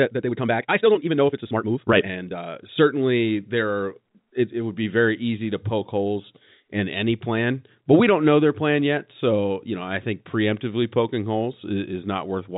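From the start to 2.48 s the speech rushes along at twice its normal pace, at unchanged pitch, until "certainly there are it". This time-stretched section was likely squeezed by software dropping short pieces to fit a length.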